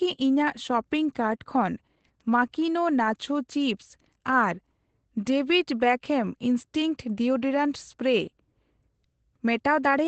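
From start to finish the speech carries Opus voice compression. Nothing is present above about 8.6 kHz, so the top end is clipped to a wideband limit, and the voice has a hoarse, faintly robotic grain from the linear-prediction coder rendering its excitation coarsely, consistent with SILK at a low rate around 12 kbps. A simple low-pass filter would only dull the sound. This damage roughens the voice's texture, and it is plainly audible throughout.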